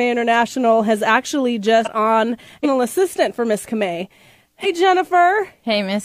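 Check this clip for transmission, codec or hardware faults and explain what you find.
Damaged data in a compressed stream appears three times: 1.81–1.87 s just after "has actually", 2.60–2.66 s, and 4.60–4.66 s. Corrupted bytes make the decoder misread frames and hunt for the next header, giving brief glitches.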